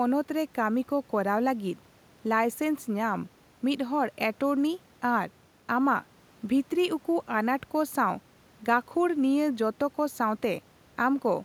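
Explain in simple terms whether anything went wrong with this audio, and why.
Nothing went wrong with this speech recording. No glitch, dropout or distortion can be heard anywhere in it.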